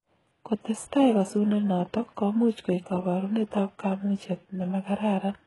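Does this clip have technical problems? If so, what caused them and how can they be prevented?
Yes. Likely HE-AAC compression near 12 kbps rebuilt the treble from copied lower bands, leaving s sounds gritty and metallic throughout, with nothing above 11.5 kHz. Encode at a higher bitrate or with plain AAC so the upper spectrum is actually coded rather than synthesised.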